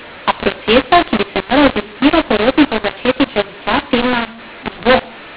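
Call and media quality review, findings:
Harsh, gritty distortion throughout; pauses fill with hiss. mu-law and A-law mixed up: A-law stream decoded as mu-law, scrambling levels and lifting quiet samples.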